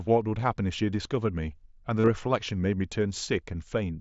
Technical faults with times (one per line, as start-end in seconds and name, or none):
2.00-2.08 concealed Bluetooth headset packet loss